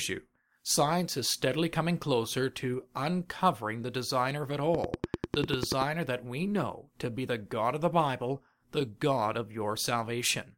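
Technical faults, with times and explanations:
4.75 to 5.83 s, train of clicks: a steady ticking of roughly ten sharp, near-identical pops at about 10.3 per second, evenly spaced and standing well above the speech, about 15 dB hotter. This is likely interference from nearby equipment or a faulty connection or power supply injecting repeated pulses.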